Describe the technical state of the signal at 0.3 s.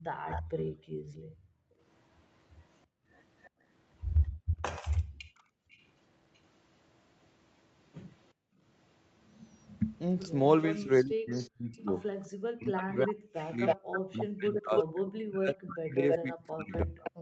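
Right around 0.3 s there's an echo leak, spanning 0.28 to 0.43 s. You hear a faint delayed copy of the speech, roughly 15 dB under it, trailing by 329 ms. Likely the other end's echo canceller let some of its loudspeaker pickup slip back into the call.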